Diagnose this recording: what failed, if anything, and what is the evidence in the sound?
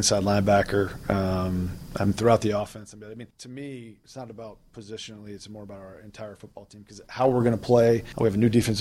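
A fast ticking, zipping texture rides on the sound from 6.92 to 7.32 s as the level changes by around 20 dB. This is zipper noise: the gain moves in unsmoothed 2 dB steps, roughly thirty per second, likely applied once per buffer, each step clicking.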